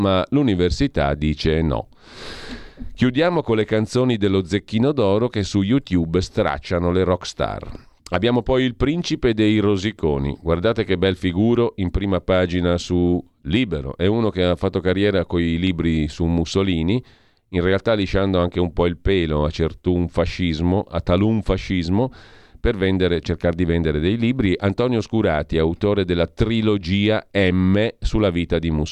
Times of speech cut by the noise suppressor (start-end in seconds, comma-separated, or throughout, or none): none